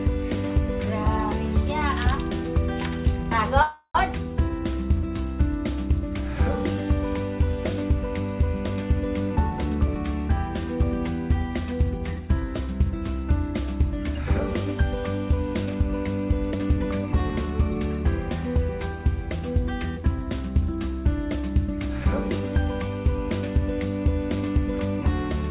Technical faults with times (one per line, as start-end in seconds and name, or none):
3.62-3.97 call audio freeze
9.29-9.96 jitter buffer speed-up
16.51-17.81 jitter buffer speed-up